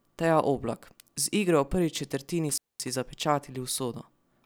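A loose connector briefly opens at 2.49 s: intermittent contact cuts the speech for about 220 ms, with crackle at both edges until 2.88 s.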